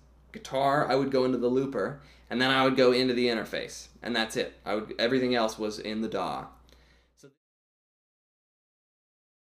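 No faults to report; the level eases down in a smooth fade-out from around 6.5 s to 7.38 s, with no click or hard edge at the end.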